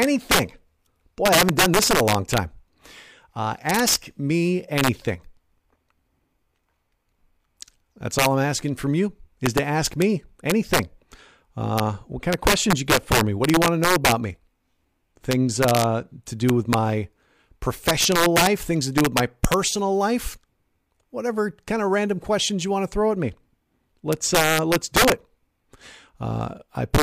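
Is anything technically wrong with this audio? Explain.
Yes. Integer overflow runs throughout this speech clip. The signal is driven about 10 dB past full scale, and instead of being limited at the maximum integer value, each peak that exceeds it wraps around to the opposite extreme of the range. Under one percent of samples go over, so the damage sits on the loudest syllables. Each one snaps into a violent, harsh crack, far sharper and more abrupt than ordinary clipping.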